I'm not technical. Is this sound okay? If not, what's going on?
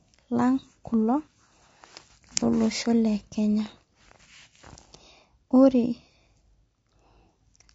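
No. The speech sounds rough and grainy throughout, likely from low-delay AAC compression: the graininess clings to the voice itself, unlike steady background hiss.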